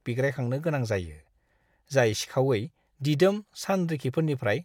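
No technical faults are audible.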